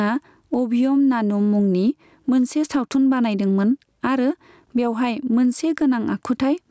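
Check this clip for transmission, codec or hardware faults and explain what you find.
One fault runs through the whole clip: gain pumping, heard alongside the call microphone processing's normal low-bass cut and 8 kHz top end. The microphone gain was likely set far too high, so a fast limiter clamps down on each loud stretch of speech. The gain swings by around 10 dB, leaving the levels flattened and squashed.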